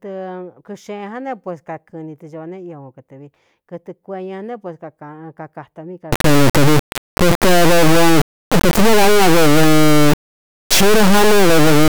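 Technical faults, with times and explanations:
6.13–11.89 s, integer read as float: after "né pues kakātā mí", 32-bit integer samples appear decoded as float, so output snaps between silence and clipping, a harsh, loud square-wave buzz.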